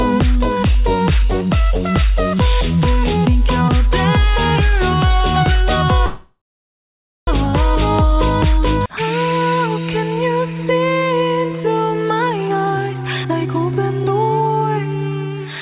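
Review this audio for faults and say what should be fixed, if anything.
Packets were likely delayed in transit so the jitter buffer ran dry, producing a call audio freeze from 6.06 to 7.29 s. The receiver extended the last sound briefly, then fell silent for about 0.9 s. Playback resumed where it stopped, so nothing is lost, but the gap adds about 1.2 s of delay. A larger or more adaptive jitter buffer, plus a steadier network route, would keep the buffer from emptying.

From 12.19 to 14.79 s a jitter buffer speed-up occurs. With more audio queued than its target, the buffer repeatedly cut short pitch-period pieces, about half a second in total. The sound plays at 122% speed with unchanged pitch and feels hurried. Draining excess delay more gradually, or during pauses, would make the catch-up far less noticeable.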